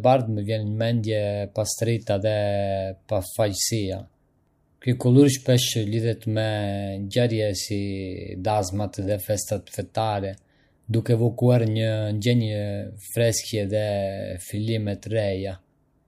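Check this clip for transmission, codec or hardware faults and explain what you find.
Nothing in this speech recording stands out as a fault, so there's nothing here to pin down or explain.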